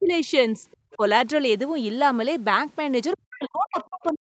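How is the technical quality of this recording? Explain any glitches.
The recording has clear call-related glitches. The speech level collapses repeatedly, and faint fragments of a second voice break through near the end. The audio stops at 8 kHz, consistent with an Opus call path.

Speech suppressed in double talk occurs at 0.0–0.3 s (a drop of about 25 dB), 0.54–0.66 s and 0.95–1.02 s (about 10 dB each), and from 3.14 s to the end (about 40 dB). The talker audibly ducks or drops out, likely because the echo canceller attenuated everything while both sides spoke.

The other side's voice leaking through appears at 3.12–3.17 s, about 30 dB below the speech, and at 3.8–3.86 s, about 20 dB below. These are brief scraps of a second voice, likely loudspeaker echo that the canceller left in the microphone signal.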